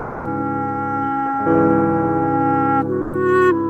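From 0 to 0.23 s, and again from 3.03 to 3.11 s, the sound gives way to steady comfort noise. This is likely sound dropped by the voice detector, consistent with Opus DTX. Unlike a packet-loss gap, the fill is even noise rather than a glitch.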